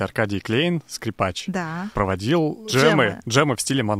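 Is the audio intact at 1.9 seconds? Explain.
No. At 1.9 seconds, as throughout the speech, there is gritty, signal-following grain, likely low bit depth without dither from truncation to around 10 bits. The rounding error sits roughly 45 dB below the signal. On a spectrogram it forms a broadband haze that appears only with sound, and the waveform shows stepped quiet passages.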